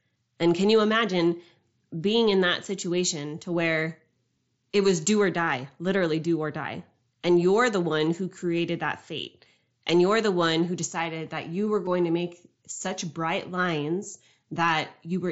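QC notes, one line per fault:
4.37 s and 11.86 s, concealed Bluetooth headset packet loss: gaps of 7.5 ms and 15 ms, consistent with one and then two lost headset packets, are filled by repeating the best-matching recent stretch of waveform, so the single loss is nearly hidden while the two-packet run gives a brief buzzy tone with a small warble where real audio returns.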